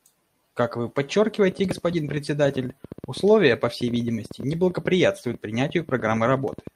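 A speech recording carries an uneven ticking from 1.49 s to the end, around 10.7 clicks per second, with peaks roughly as loud as the speech itself and audible through the pauses. This train of clicks is likely from electrical interference or a faulty connection or power supply. At 2.05–2.07 s there is a brief rough, noisier patch lasting 20 ms with no gap, which fits a single lost packet rebuilt from error correction: the decoder played the lower-bitrate copy carried by the following packet.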